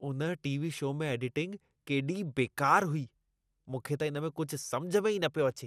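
Speech with audible MP2 compression damage throughout: the sound is dull, with a gurgling, granular texture, likely from MPEG Layer II coding at a low rate, around 80 kbps. A spectrogram shows nothing above 14.4 kHz, with upper sub-bands flickering in and out as blocky patches.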